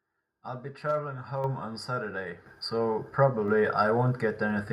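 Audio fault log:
1.44 s and 2.46 s: microphone volume stepped up. The speech and the background noise behind it jump louder together in a single step, first by about 6 dB and then by about 7 dB more. The whole input rises at once, not just the talker, which points to the call software judging the microphone too quiet and raising the device's input volume twice.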